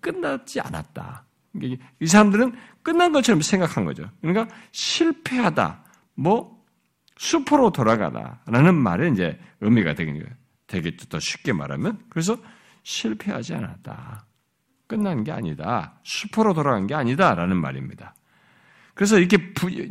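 No dropouts, clipping, glitches or other playback faults are audible anywhere in the recording.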